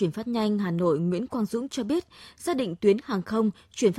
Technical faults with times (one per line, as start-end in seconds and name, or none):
none